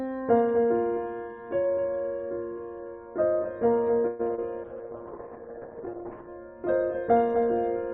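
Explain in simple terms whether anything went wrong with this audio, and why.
A doubled audio track runs through the whole piece of music: a quieter copy trails roughly a third of a second behind, likely from the sound being captured twice through a slower path.

From 4.07 to 4.21 s there is a call audio freeze. The sound stalls and stretches into a fading buzz, likely because network delivery paused, then resumes where it stopped with nothing lost.

Two brief short concealed packet losses follow, at 4.27 to 4.31 s and 4.35 to 4.39 s. Missing fragments were patched by extending the preceding sound, causing small smears.

From 4.65 to 6.35 s a call bitrate drop makes the music rough and muffled, with everything above 6 kHz cut off, because the connection squeezed the encoder's data budget.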